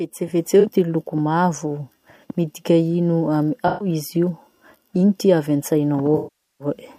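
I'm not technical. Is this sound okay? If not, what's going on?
No. The speech has AAC frame loss with concealment. Small pieces of audio went missing. The player covered each gap by reusing the last good sound. Listen at 0.60 s, 3.67 to 3.88 s, and 6.17 to 6.67 s. The first two patches sound smeared or hissy; the last one fades to a very faint hiss and then fades back in.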